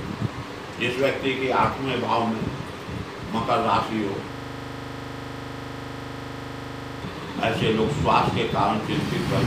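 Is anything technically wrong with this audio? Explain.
Yes. From 4.32 to 7.02 s there is a system hang loop. The computer or audio driver stalled while the sound hardware kept replaying the same 40 ms stretch of its buffer, repeating it about 68 times at 25 Hz. The result is a rough, buzzy rattle that is frozen in place. Unlike packet-loss stutter or a dropout, each repeat is identical and perfectly periodic, with no gaps or variation, until normal audio resumes.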